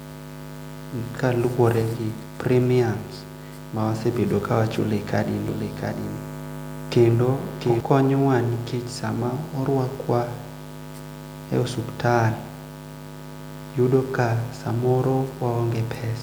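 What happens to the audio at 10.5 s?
Nothing goes wrong at 10.5 s; the speech there is intact, with no dropout, click, distortion or other fault.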